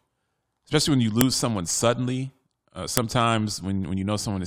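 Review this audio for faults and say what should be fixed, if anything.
File header played as audio at 1.21 s and 2.97 s: sharp clicks where joined speech segments kept their WAV headers, which played back as samples. Strip headers from every piece before concatenating or streaming.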